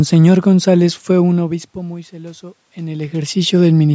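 Automatic gain rising runs from 1.46 to 3.48 s, starting just after "fue un". The level reaching the microphone dropped by about 19 dB, partly as the talker moved back around 1 s. The gain control judged the input too quiet and raised its gain by about 5 dB over two seconds. The voice and the room noise behind it swell together, so the background audibly climbs along with the speech.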